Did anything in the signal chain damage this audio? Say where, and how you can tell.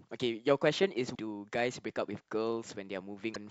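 Yes. The damage sits at the codec stage, in the compressed speech stream. There is damaged data in the compressed stream at 1.11 to 1.17 s and again at 3.31 to 3.36 s. Each event lasts about 54 ms and is heard as a short blip that breaks the speech. Corrupted bytes there stop the decoder from reading those frames correctly. It loses sync and scans ahead for the next valid frame header before clean decoding resumes.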